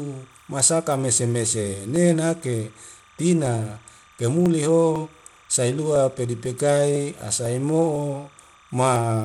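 From the first moment to the end, a chirping warble sits behind the speech, around 30 dB below it. This is timecode bleed: linear timecode at 29.97 frames per second, leaking in from a nearby track or cable. Its square wave flips between pitches near 1 kHz and 2 kHz, so it trills with a fast, data-like rhythm. A steady tone or mains hum would hold one pitch.

Throughout the clip the top end is dulled and flickers in and out, and a gritty, aliased fizz rides on the speech. The likely cause is Bluetooth SBC compression at a low bit allocation, consistent with roughly 96 kbps. The weaker upper sub-bands get almost no bits and everything else is coarsely quantised. The damage is fixed to broad frequency bands, rather than the swirling, shifting artefacts of a codec with a hearing model.

From 0.46 s to 8.96 s, small ticks fall exactly every 0.5 s, about twenty of them. These are periodic USB or driver dropouts: a background task stalls the bus or driver at a fixed interval, and about half a millisecond of audio is skipped each time. 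The ticks come only while speech is sounding, which sets them apart from an electrical click that is present in silence too. Their strict half-second spacing also rules out random digital glitches.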